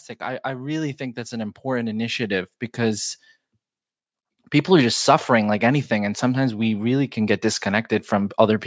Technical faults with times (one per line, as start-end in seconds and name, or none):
0.18-3.08 automatic gain rising